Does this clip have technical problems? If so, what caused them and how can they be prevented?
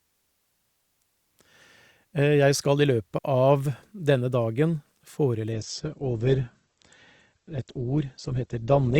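Yes. A digital wireless dropout occurs at 3.18 to 3.24 s. The receiver lost too much data from the radio link and muted the speech for about 60 ms, leaving a clean hole of near silence with no click or noise burst around it. On a waveform this shows as a short flat line after a very brief fade, and on a spectrogram as a narrow vertical gap blank across all frequencies. Keeping the transmitter in clear line of sight, within range, and away from crowded channels prevents it.

From 5.52 s to the end, the adaptive stream switches to a lower bitrate. Because the connection slowed, the player switched to a lighter encoding, and the sound fits a change from roughly 64 kbit/s to roughly 12 kbit/s Opus. The treble cuts off suddenly with nothing above 8.2 kHz, and the speech sounds thinner, with more codec artefacts. A spectrogram shows the upper band going dark at that point with a sharp horizontal ceiling, and there is no gap in the waveform. 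A steadier, faster connection or a higher minimum bitrate setting in the player prevents it.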